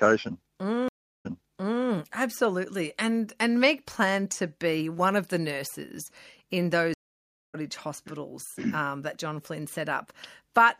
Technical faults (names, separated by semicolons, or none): stream reconnect